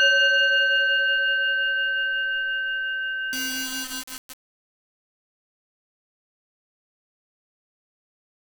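Low bit depth without dither runs from 3.33 s to the end at 8.45 s. The sound turns coarse and grainy, with distortion that moves with the level and character of the audio. Quieter parts break up into a rough sputter or fall to silence. The likely cause is rounding to very few amplitude steps, which fits about 3 bits, with no dither to decouple the error from the signal. That error sits roughly 10 dB below the sound itself.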